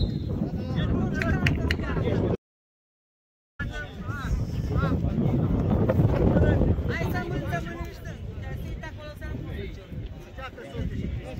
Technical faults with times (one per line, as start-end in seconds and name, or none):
2.36-3.59 audio dropout to silence